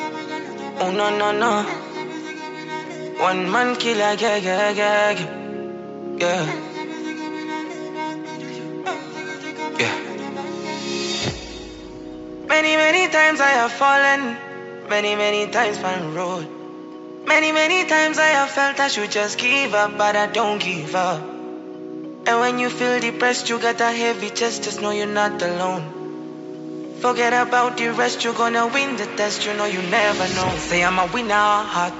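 Nothing in the audio stood out as a technical problem on listening.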